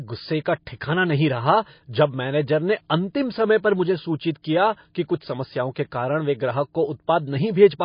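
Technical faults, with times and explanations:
Throughout: MP3 compression, likely from a low bitrate around 24 kbps; nothing above 5.1 kHz, and weak frequency lines flicker frame to frame, giving a watery swirl rather than steady dullness.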